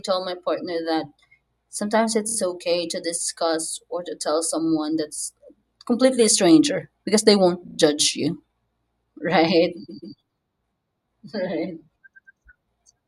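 Repeated frames at 2.28, 7.68, 9.88 and 12.14 s: short runs of compressed frames replay two or three extra times, stuttering blocks of 16, 45, 139 and 116 ms.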